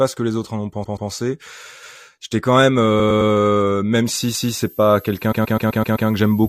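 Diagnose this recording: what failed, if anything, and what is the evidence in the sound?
Repeated frames appear at three points in the codec or transport stage. From 0.83 to 1.09 s, a block of about 128 ms plays twice more. From 2.99 to 3.31 s, a block of about 107 ms repeats three extra times. From 5.31 to 6.08 s, a 128 ms block plays six extra times. Together these add about 1.34 s. The irregular spacing and multiple replays of the same block point to resent or rewritten frames rather than a chunking fault.

Overlapping chunks show up in the driver or buffer stage. At 1.83 to 2.03 s and again at 4.35 to 4.55 s, a 200 ms stretch plays twice at the join. The chunks are 2 s long, and each piece plays only once more. Each processing chunk began 200 ms before the previous one ended.

A switching supply whistle comes in through the analogue power or wiring path. From 4.06 s to the end, a high tone sits between about 12.0 and 12.5 kHz, roughly 25 dB below the speech. 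Its pitch drifts within that band. Because it is tonal and starts at a definite moment, it is distinct from broadband hiss or codec artefacts.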